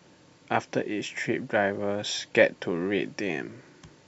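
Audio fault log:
Nothing stood out on listening to this speech recording.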